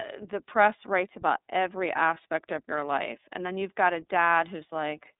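From start to finish, the speech has passed through the iLBC codec, coding each 30 ms frame's excitation independently of the previous one, at a rate consistent with its 13.33 kbps mode. A narrowband line of about 250 Hz to 3.7 kHz means nothing above 3.8 kHz survives, so the speech sounds muffled and telephone-like. The coding damage is plainly audible as a rough, slightly synthetic buzz on the speech.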